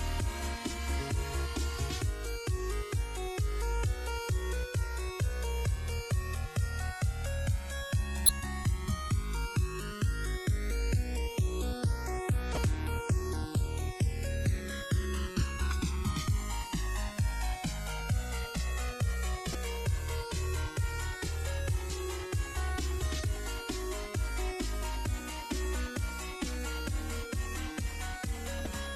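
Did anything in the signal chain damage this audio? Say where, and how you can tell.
Yes. At the converter stage, the two channels show channels drifting apart. They were captured on separately clocked devices that differ by a few hundred ppm, so the interchannel delay grows to a few milliseconds by the end. In mono, the comb notches sweep slowly, which gives a gradual flanging.

At the codec or storage stage, damaged data in a compressed stream produces brief chirps or blips, each about 30 ms long, at 8.26, 12.54, 19.52, 21.87 and 28.63 s. Corrupted frames make the decoder lose sync and jump ahead to the next valid frame header.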